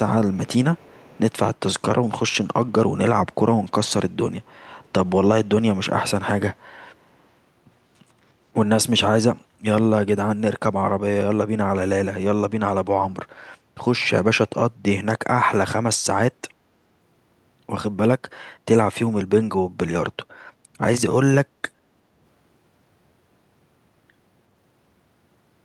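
Echo leak at 0.33–0.48, 0.75–1.32, 4.84–4.89 and 7.02–7.15 s: faint scraps repeating speech 364 ms later, roughly 30–40 dB down, likely from incomplete echo cancellation, visible as ghost spectrogram traces trailing the originals.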